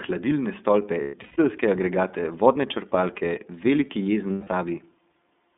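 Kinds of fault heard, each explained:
iLBC codec: The speech sits in a narrow telephone band, roughly 200 Hz to 3.6 kHz. Each frame is coded on its own, leaving a plainly audible rough, synthetic edge. The sound fits iLBC at its 13.33 kbps, 30 ms frame mode.
Lost iLBC frames: Dropped packets are filled by repeating the last pitch cycle with added noise, giving a held, buzzy vowel. After "hladilne stolpe", losses totalling 270 ms scatter across 1.01 to 1.38 s, the longest run about 150 ms. Another 150 ms gap falls at 4.32 to 4.49 s.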